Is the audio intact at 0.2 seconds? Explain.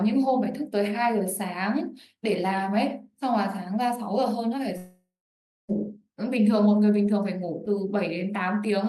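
Yes, at 0.2 seconds the audio is intact, with no audible fault at that moment.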